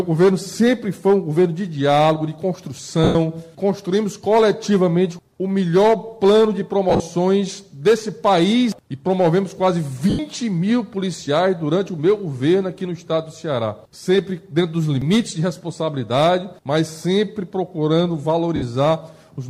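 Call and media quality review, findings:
Lost LE Audio frames at 3.04 s (110 ms), 6.90 s (scattered over 100 ms, longest gap around 40 ms), 10.10 s (90 ms) and 18.56 s (60 ms). LC3 decoder concealment repeats the last spectrum with random signs, turning tones into a noisy smear that fades. The gaps fit 10 ms frames.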